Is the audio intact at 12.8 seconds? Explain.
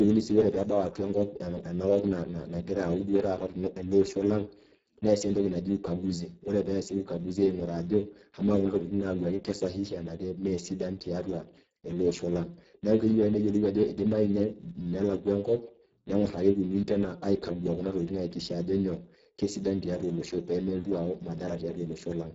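No. At 12.8 seconds, as throughout, Speex codec damage is heavy: roughly 6 kbps starves the CELP excitation, leaving noisy, hoarse speech with nothing above 7.7 kHz.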